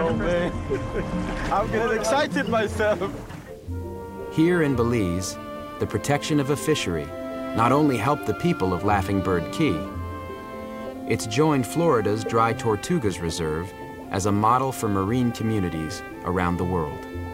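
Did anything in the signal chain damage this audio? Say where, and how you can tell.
Yes. From 1.43 s to the end, the sound carries a grainy distortion that tracks the signal, with an error floor about 35 dB below it. This is low bit depth without dither. The likely stage is a sample-format conversion that rounded the samples to a coarse grid with no dither, which fits an 8-bit format. Because the rounding error follows the waveform, it is heard as grit on the sound.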